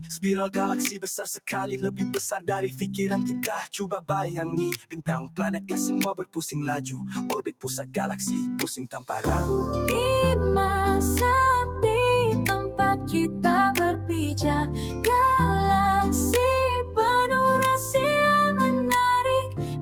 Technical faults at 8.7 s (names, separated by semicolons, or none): noise suppressor applied to music or sounds